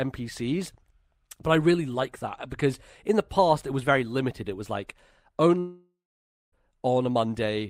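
At 5.59 s the speech stops and the last sound is stretched into a buzzy, fading tail, which gives way to about 0.55 s of silence before the audio resumes at 6.54 s. Roughly 0.94 s of material is simply gone; the speech picks up further on rather than where it broke off. This is most likely a long network dropout: packets stopped arriving, the receiver concealed the gap by extending the final sound, then ran out of anything to play.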